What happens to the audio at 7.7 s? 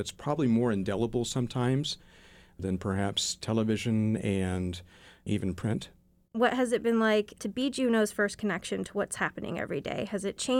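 Nothing goes wrong at 7.7 s; the audio plays through that moment intact, with no dropout, click or other fault.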